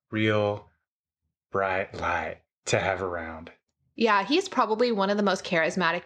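Speech recording with no technical faults to be heard.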